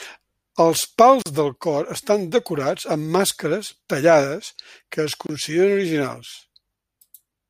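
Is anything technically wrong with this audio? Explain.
Yes. The speech was encoded in separate pieces and joined without trimming, so each gap at a join of encoded pieces keeps the encoder's start-up delay and final-frame padding. Speech drops into silence from 1.22 to 1.26 s (about 39 ms) and from 5.27 to 5.29 s (about 26 ms), with smeared edges, then resumes where it stopped.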